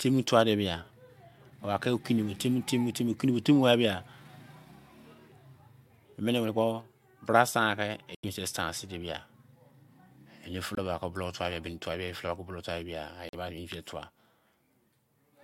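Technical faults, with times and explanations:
8.15–8.24 s, 10.75–10.79 s and 13.29–13.34 s, corrupt frame muted: the speech drops to dead silence with a hard edge, for about 94, 34 and 54 ms. Damaged compressed frames were rejected by the decoder and replaced with silence, so the holes are abrupt but the timing holds.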